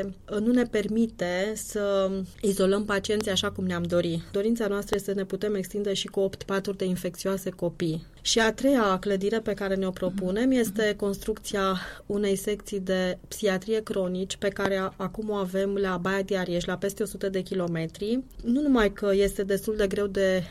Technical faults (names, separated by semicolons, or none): loud pop